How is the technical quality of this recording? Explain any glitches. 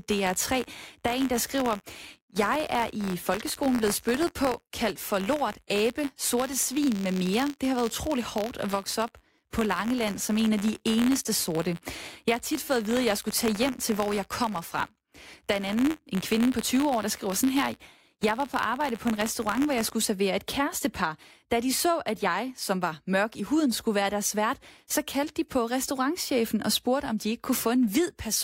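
The recording has one technical fault, a buffer tearing problem affecting the first part of the speech.

Buffer tearing runs from 0.0 to 19.9 s. The software filling the playback ring buffer and the hardware reading it have drifted out of step, so their positions cross inside every period. A small slice of each buffer carries audio from about 20 ms earlier, joined abruptly on both sides. This produces a steady robotic buzz at 86.1 Hz riding on the speech, which fits a 512-sample buffer.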